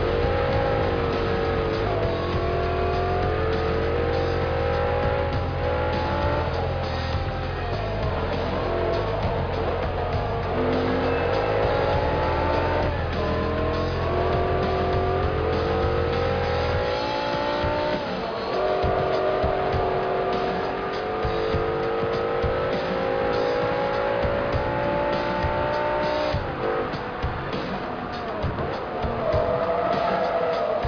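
No technical faults are audible.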